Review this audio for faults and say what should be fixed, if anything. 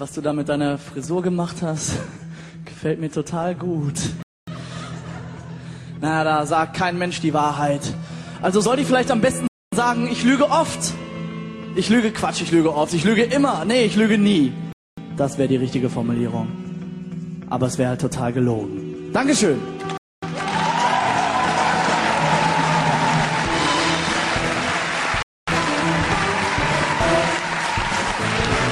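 A gap between chunks interrupts the sound five times, at 4.23–4.48 s, 9.48–9.73 s, 14.73–14.98 s, 19.98–20.23 s and 25.23–25.48 s. Each hole lasts 250 ms, and they recur every 5.25 s, pointing to 5-second chunks joined with silence inserted between them. Unlike a dropout, nothing is missing: the sound resumes exactly where it stopped. To prevent it, join chunks gaplessly by trimming codec padding and queuing each chunk before the previous one ends.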